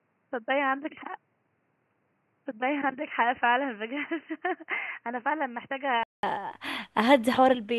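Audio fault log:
0.00–6.23 s, input switched to a poorer device: dull speech, nothing above 3 kHz, noticeably quieter with its own faint noise, then a 200 ms gap; likely a device change, not filtering.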